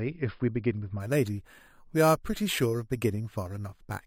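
From 1.00 s to the end of the speech clip, there is imaging from sample-and-hold upsampling. The audio was raised from 11 kHz to 44.1 kHz by holding each sample about four times with no smoothing filter, so mirrored copies of the spectrum fold around multiples of 11 kHz. The result is a bright metallic fizz riding the voice at about 18 dB below it. On a spectrogram, inverted harmonic ghosts fill the 5.5 to 11 kHz band and move opposite to the pitch. Zoomed in, the waveform shows small staircase steps.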